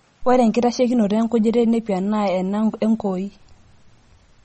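MP3 compression runs throughout: nothing is heard above 8.4 kHz and faint detail flickers wetly, likely from an encoder starved of bits at around 32 kbps.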